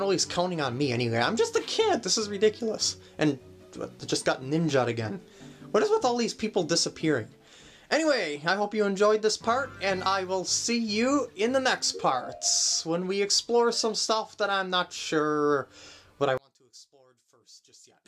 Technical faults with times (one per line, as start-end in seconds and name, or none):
16.37-18.08 one channel inverted